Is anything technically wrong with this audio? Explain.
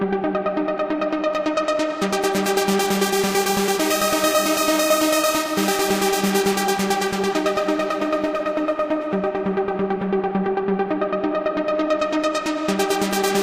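No, nothing in this recording stood out as a technical problem on listening.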